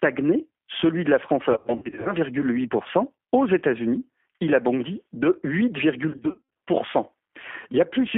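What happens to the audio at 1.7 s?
From 1.52 to 2.13 s, VoIP packet loss concealed by the speech codec: about 350 ms of lost packets, scattered over 540 ms, with the longest gap 90 ms. The decoder extrapolates from its last pitch and filter with falling gain, so the speech smears into a buzzy tone or coloured noise that fades rather than dropping to silence, and it stays weak briefly after packets return. Underneath runs the G.729 codec's rough, synthetic 200 to 3400 Hz band, present throughout rather than only here.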